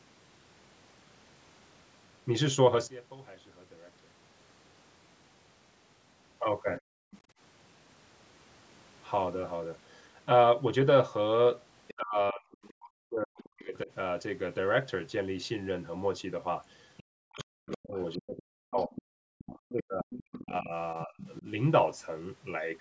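From 2.87 to 4.37 s the speech suddenly falls by about 22 dB, leaving a faint residue. This is one channel inverted: one side of the stereo pair has likely had its polarity reversed, so when the channels are summed to mono, everything centred cancels and only their small difference survives. On a waveform the envelope collapses to a sliver for that stretch. On a spectrogram the whole band fades.

Around 6.78 to 7.16 s a second, quieter voice comes through, roughly 25 dB below the main speech. This is the other side's voice leaking through, likely because the loudspeaker's playback reached the microphone and the echo canceller left part of it behind. It shows on a spectrogram as faint harmonic traces with a different pitch track, sitting beneath the main speaker's energy. The call's band tops out at 8 kHz.

Overlapping that, from 6.81 to 7.35 s, the room background drops out by about 40 dB for roughly 0.4 s in total, then returns. 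This is background gated by the echo canceller: while the loudspeaker was active, the canceller clamped the microphone hard, taking the ambient noise with it. A spectrogram shows the noise floor blanking to near-black across all frequencies, and a waveform shows a flat, near-silent gap between the surrounding noise.

The leak returns from 11.88 to 13.47 s at roughly 20 dB below the speech, and again from 16.97 to 21.33 s at roughly 15 dB below, growing more audible each time. Over nearly the same spans, 11.94 to 13.89 s and 17.08 to 21.46 s, the main speech dips. This is speech suppressed in double talk: with both sides talking at once, the canceller likely could not tell the local voice from the echo and pulled both down, by as much as about 40 dB. In the first stretch roughly 1.5 s of speech is affected in total, and in the second roughly 3 s. On a waveform the main speech envelope sags unevenly. 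On a spectrogram the main speech energy thins in patches while the fainter leaked voice persists underneath.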